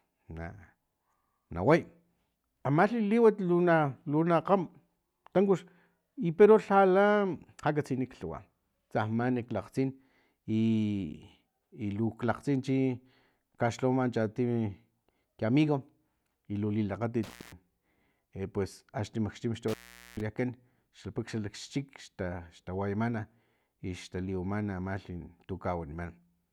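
At 17.23 s, after "i lu", and at 19.68 s, the sound cuts out with crackle at each edge for 0.22 s and 0.44 s. This is intermittent contact, a loose connection briefly opening the line.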